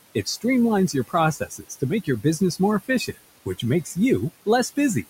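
Noise suppressor artifacts run through the whole recording. The suppressor estimates the steady room noise and pulls those bands down by about 19 dB frame by frame, so the room noise, sitting about 17 dB below the speech, sinks in the gaps and creeps back under each phrase. Unlike a gate or dropout, the floor never falls to silence; it breathes with the speech.

Speech cut by the noise suppressor then strikes four times: 0.88–1.14 s, 1.37–1.82 s, 2.04–2.41 s and 2.82–3.17 s. Here the suppressor mistook soft speech for noise and dragged it down with the background, by up to about 18 dB in the first stretch and about 14 to 15 dB in the others. Only parts of each span are hit, roughly a tenth to a third of a second at a time, so the affected speech sounds swallowed rather than the signal dropping out cleanly.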